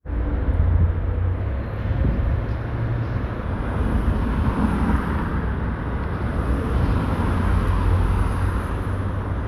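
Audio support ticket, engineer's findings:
Wrong sample rate, 1.39–3.44 s: playback clock mismatch, fits 44.1 kHz material played at 48 kHz unconverted. Sound runs 1.09× fast, pitch up about 1.5 semitones.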